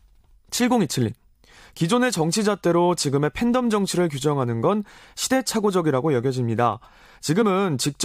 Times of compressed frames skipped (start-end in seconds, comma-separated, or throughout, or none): 7.41-7.43